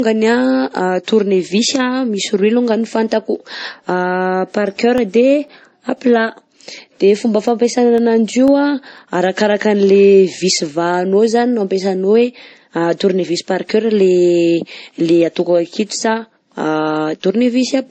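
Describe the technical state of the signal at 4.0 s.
At 4.0 s you're hearing what's there for the whole clip: speech with nothing above about 8.4 kHz, plus a layered, smeary coding texture. That's most likely transcoding between lossy codecs, something like a low-rate MP3 pass then re-encoded as WMA. The second encoder wastes bits reproducing the first one's artefacts and adds its own, so you get both kinds of grit stacked together, and the earlier low cut-off sticks.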